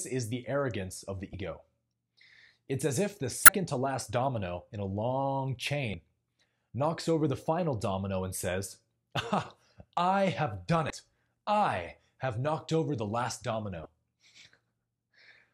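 Brief glitches from damaged data in a compressed stream break into the speech at 1.31–1.34, 3.45–3.49, 5.91–5.94, 10.87–10.90 and 13.82–13.86 s. At each, the decoder misreads corrupted frames and loses sync, producing a roughly 35 ms disruption.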